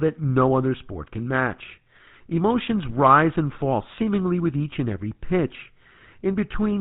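From start to finish the speech has a buzzy, gravelly roughness and nothing above 4 kHz, so it sounds dull and grainy. This is the GSM full-rate codec, which fits 13 kbps coding: the vocal tract is modelled and driven by sparse, regularly spaced pulses.

Between 2.90 and 2.94 s a short squawk and gargle break through the speech. These are GSM bit errors. Flipped bits corrupted the filter, pitch or gain values, distorting the spectrum and level over a stretch that fits about three frames.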